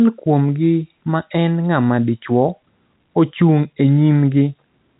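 No technical faults can be heard in the speech, which carries the narrow band of G.711 telephone coding, with nothing reaching above 3.8 kHz.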